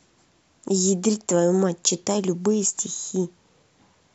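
No technical faults are audible.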